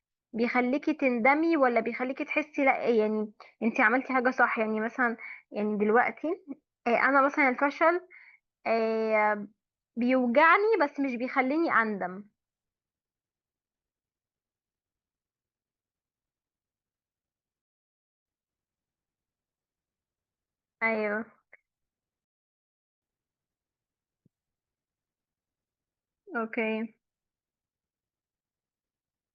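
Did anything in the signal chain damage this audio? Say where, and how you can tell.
Yes, the playback stage ran dry twice, causing a rebuffering stall each time. The player's download buffer emptied, so it halted output until more data arrived. In this speech clip the sound drops to silence from 17.62 to 18.26 s (0.64 s) and again from 22.25 to 23.02 s (0.77 s), then picks up exactly where it broke off. No audio is lost or skipped. The gaps simply add time and interrupt the flow.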